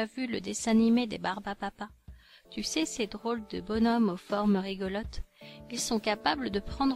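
No technical faults can be heard anywhere in it.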